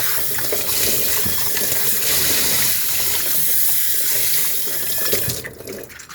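No technical faults can be heard anywhere in the clip.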